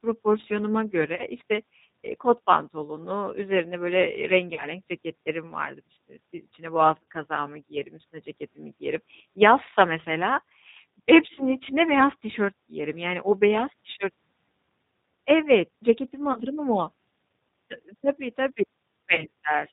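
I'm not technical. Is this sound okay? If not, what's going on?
No. The whole recording has passed through the G.729 codec, a phone-call compressor that rebuilds the voice from a rough model and drops everything above 4 kHz. Unlike a simple muffled recording, it sounds slightly rough and synthetic all the way through, not just dull.

On top of that, there is VoIP packet loss concealed by the speech codec at about 1.16, 4.54, 7.03, 11.35, 16.33 and 19.15 seconds. Each time, a piece of the call went missing and the decoder guessed, stretching the last sound into a fading buzz or noise rather than leaving a silent gap or a click.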